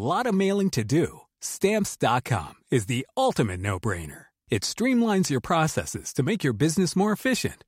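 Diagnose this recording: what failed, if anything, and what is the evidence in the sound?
Nothing in this speech recording points to a failure at any stage of the chain. No stage, from the wiring through to playback, leaves an audible trace.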